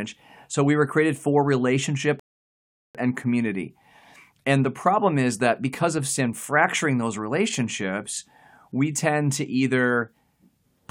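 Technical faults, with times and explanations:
2.20–2.95 s rebuffering stall: the speech halts into 0.75 s of silence, then resumes exactly where it stopped, because playback ran out of downloaded audio and waited for more. The waveform shows a flat gap, and the spectrogram shows an empty vertical band.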